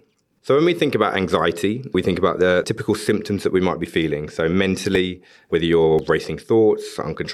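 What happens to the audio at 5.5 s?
CD scratch ticks run through this moment, from 4.95 to 6.50 s, in the speech. A scratch or blemish on the disc wipes out more data than the player's error correction can restore, so on each revolution the damaged samples are interpolated or muted. Across this stretch that produces seven short ticks, the longest only a few milliseconds, arriving at a steady rotational rhythm with uneven strength.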